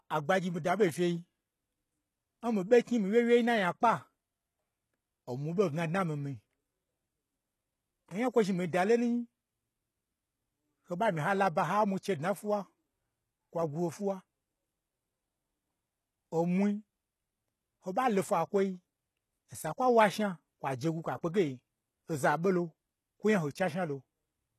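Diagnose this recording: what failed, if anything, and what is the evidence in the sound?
The failure sits at the codec stage, and it runs through the whole speech clip. Sibilants sound gritty and lispy, and nothing survives above 12.3 kHz. The damage is plainly audible. This is likely HE-AAC compression at a low rate, which fits about 16 kbps. Replicated treble does not match the true harmonics.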